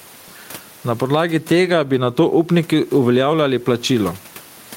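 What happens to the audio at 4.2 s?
At 4.2 s the clip is still caught in the gain pumping that runs through the whole recording. The background sits about 33 dB below the speech, and the gain swings by roughly 10 dB, pulled down whenever the talker gets loud. Likely cause: input gain set far too high, with a fast limiter clamping down on every peak. On a waveform the peaks look flattened to one height.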